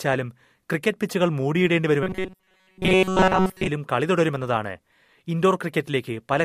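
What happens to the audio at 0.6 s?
Nothing goes wrong at 0.6 s; the speech carries on intact through that moment with no dropout, click or distortion.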